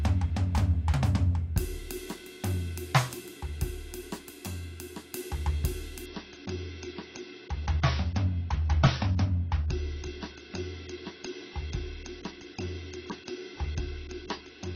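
It's a music clip, and at 6.06 s it drops abruptly to an adaptive stream at a lower bitrate. Nothing above about 6.6 kHz survives from there to the end, and the artefacts thicken. That sounds like a jump from roughly 96 to 24 kbit/s AAC.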